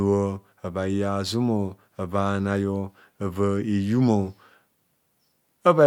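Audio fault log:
No faults detected in this speech recording.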